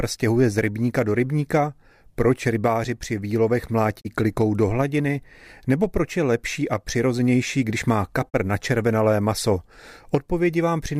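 Digital broadcast dropouts at 4.00 to 4.07 s and 8.28 to 8.36 s: the speech fades out over 20 ms into brief silence, consistent with the receiver muting after one corrupted 32 ms frame.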